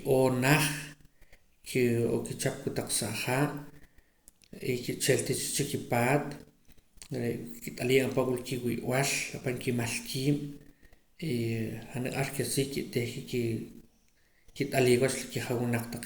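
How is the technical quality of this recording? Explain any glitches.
Nothing here glitches; the speech runs along steadily without a single technical hiccup to point to.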